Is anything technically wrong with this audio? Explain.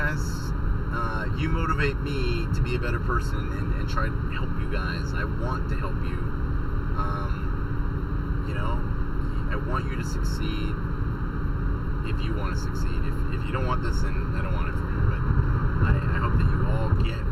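Yes, there's channel delay (comb filtering) throughout: one channel lags by under a millisecond, and the mono sum cancels evenly spaced frequencies from around 700 Hz upward, so it sounds hollow and phasey.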